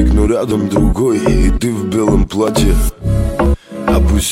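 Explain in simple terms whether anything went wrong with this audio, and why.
Two tiny skips can be heard, at 2.48 s and 3.46 s. This is an overlap between stream segments. The audio arrives in pieces about one second long. Here, the time stamps on neighbouring pieces claimed a few milliseconds of the same time. The player threw that shared bit away, though it was not really repeated. So a sliver of sound went missing, and the waveform jumped.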